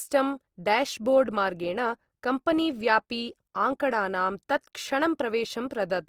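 Opus compression is audible throughout this speech clip, most likely at a low bitrate, with the grainy, rough texture fitting about 24 kbps in the codec's music (CELT) mode. With too few bits, the encoder keeps each band's overall energy but replaces its fine detail with folded copies of lower bands or noise. The voice therefore turns coarse and hissy rather than swirly, though the bandwidth stays full, reaching about 20.2 kHz.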